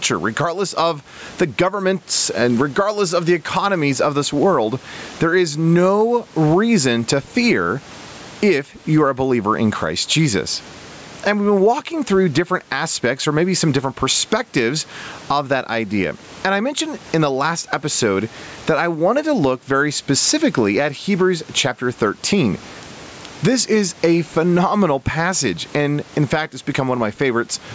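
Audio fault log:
Throughout, gain pumping: the gain swings by around 20 dB, with the faint room noise about 37 dB below the speech. Loud and soft passages end up close in level and the speech sounds squashed. This is likely the microphone gain set far too high, with a fast limiter or compressor clamping down on every peak and releasing in the gaps.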